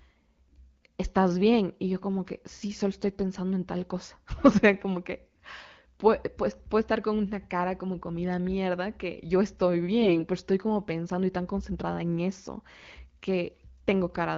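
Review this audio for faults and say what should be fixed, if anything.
AMR bit errors hit the speech from 10.02 to 10.24 s, between "mierda que yo estoy" and "pero estoy como pensando". Around a tenth of the weakly protected bits arrived flipped, so the excitation pulses and fine pitch, gain and spectral values were wrong while the frames still passed their checksum. The voice keeps its rough pitch and level but turns hoarse and gargly. Lost packets would instead leave a dropout or a smeared repeat. The 0.23 s span fits about eleven 20 ms frames. Stronger channel coding or discarding frames with poor link quality would prevent it.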